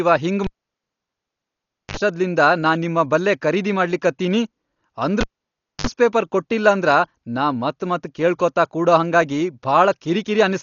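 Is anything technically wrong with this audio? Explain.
Yes. The speech sounds dull and muffled from start to finish, with nothing above about 6.9 kHz and a rough, fluttering grain around voiced sounds. This heavy damage is likely from Dolby Digital compression at a low bitrate, around 40 kbps. To save bits, the encoder cut the upper band and left many frequency lines without detail. The decoder then filled those gaps with noise, which produces the grainy texture.

Twice the sound drops out with a pop, goes nearly silent, gives a short burst of 50 Hz mains buzz of about 54 ms, then returns with another pop. The first runs from 0.44 to 1.97 s with about 1.48 s of silence, and the second from 5.21 to 5.87 s with about 0.61 s of silence. This is a cable pulled and plugged in: the live lead is yanked, and the buzz comes from the tip touching before the connection fully seats.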